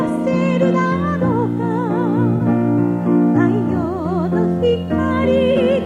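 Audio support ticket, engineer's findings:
Brief smeared, phasey patch at 2.36–2.41 s and again at 5.51–5.58 s. AAC frame loss with concealment: decoder rebuilt each gap from the previous good spectrum with randomised phase. Each span fits one lost frame of about 43 ms.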